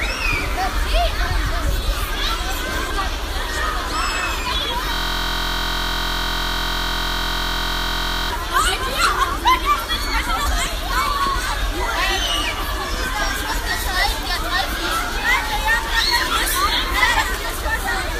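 A system hang loop runs from 4.94 s to 8.30 s. The computer or its audio driver stalled, but the sound hardware kept replaying the last ring buffer it held, so one 23.22 ms slice of audio repeats exactly, well over a hundred times, which fits a 1024-sample buffer. Because the slice is so short, the repetition merges into a steady, flat buzz at 43.1 Hz.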